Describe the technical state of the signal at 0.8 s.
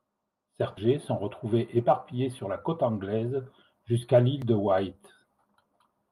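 At about 0.77 to 0.79 s there is a skip ahead. Roughly 0.4 s of audio was discarded and playback joins the two sides almost directly, with nothing filled in. Unlike a dropout, there is no silent gap, only an abrupt forward jump in the speech.

Immediately after, from 0.87 to 3.9 s, a jitter buffer speed-up trims the backlog. Short pitch-period pieces, around 0.2 s in total, are cut repeatedly, so the speech runs at 106% and sounds slightly hurried. Unlike resampling, the pitch stays unchanged.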